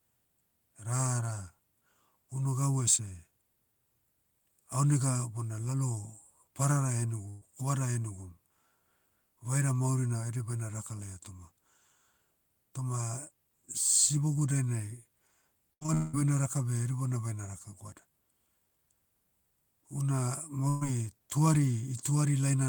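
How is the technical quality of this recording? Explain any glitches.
The recording has three packet-loss glitches in the speech.

At 7.29 to 7.43 s and again at 20.69 to 20.83 s there is a burst of packet loss. About 120 ms of audio never arrived in time. The receiver filled each hole by stretching the last sound and fading it down. You hear a brief held buzz or fading hiss. Then the speech jumps ahead, with that slice gone.

From 15.73 to 16.15 s there is repeated packet loss, heard as robotic sound, just before "baina raka". Four gaps hit in quick succession, the longest about 189 ms. Each is patched by repeating the last sound. About 71% of that stretch is concealed, roughly 300 ms missing. The result is choppy, with pieces of speech lost.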